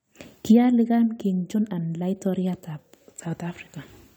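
The clip is speech with compressed frames skipped at 1.54 s. The audio jumps ahead by about 70 ms, roughly three frames of 23.2 ms each. These frames were missing or rejected by the decoder as damaged.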